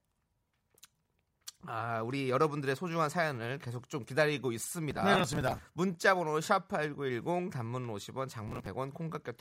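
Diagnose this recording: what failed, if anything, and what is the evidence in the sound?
Processor overload crackle at the driver or buffer stage: gritty tearing runs from 4.91 to 5.65 s and again from 8.48 to 8.66 s. Buffers of roughly 5 ms are missing their deadlines in runs and are skipped outright. Each skip leaves a hard-edged gap, and the crackle stops once the load eases.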